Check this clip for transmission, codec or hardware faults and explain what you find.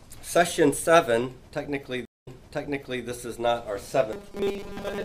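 Two faults are audible. From 2.05 to 3.05 s a stream reconnect leaves a 212 ms flat gap in the waveform before playback restarts 784 ms earlier, replaying material. From 4.13 to 5.05 s the sound turns to a rigid metallic buzz at 200 Hz, most likely from repeated short buffers of 5 ms standing in for skipped audio. On a spectrogram this shows as evenly spaced horizontal harmonic lines.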